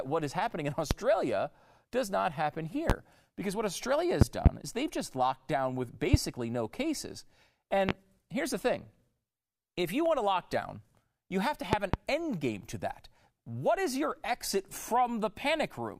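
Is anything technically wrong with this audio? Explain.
Yes, loud pops. A sudden voltage step or pulse, likely from a plug, switch, static discharge or driver glitch, is added to the signal and then shaped by the downstream circuitry. Sharp pops, roughly 20 to 25 dB above the speech, land at 0.91–0.94, 2.90–2.93, 6.14–6.17 and 7.89–7.92 s. Double pops come in quick succession across 4.21–4.49 and 11.73–11.97 s. The speech carries on underneath each one.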